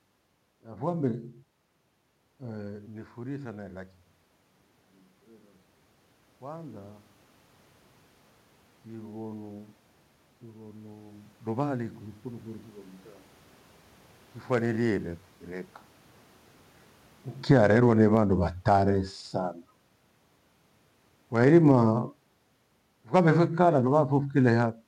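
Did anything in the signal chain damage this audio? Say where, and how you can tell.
Yes. From 0.61 to 4.03 s the speech and room noise swell together by about 4 dB: automatic gain rising in call processing, lifting a quiet input.

From 17.36 to 18.83 s and again from 21.28 to 24.79 s, the speech and background sink together by about 7 dB and 8 dB: automatic gain falling, pulling down an input that was too loud or too noisy.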